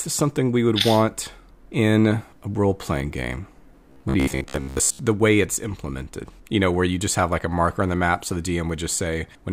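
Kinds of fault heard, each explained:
Robotic sound from repeated short buffers: from 3.90 to 4.99 s the speech turns into a rigid, metallic buzz at 66.7 Hz that follows the original only loosely. The likely cause is new audio arriving too seldom, so playback keeps replaying the last fragment, about 15 ms long, while the real material is skipped. Roughly 70 percent of this stretch is such repeats, and their fixed rate imposes the buzz.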